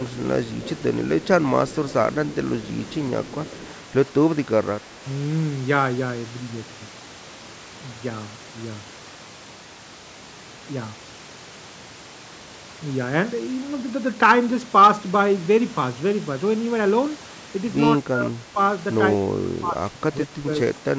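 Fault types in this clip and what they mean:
Echo leak: A faint, delayed copy of the speech comes back about 163 ms behind the original, sitting roughly 15 to 20 dB below it. It turns up in the opening seconds, from 0.0 to 0.83 s, 1.21 to 1.27 s, 1.67 to 1.93 s and 2.32 to 3.74 s. The likely cause is a far end on a loudspeaker whose echo canceller let part of the pickup return down the line.
Speech suppressed in double talk: Near the end, the speech sinks by up to about 20 dB. This happens from 17.98 to 18.58 s and again from 19.2 to 20.96 s. The likely cause is an echo canceller facing both sides talking at once. It could not tell its own talker from loudspeaker echo, so it turned everything down together.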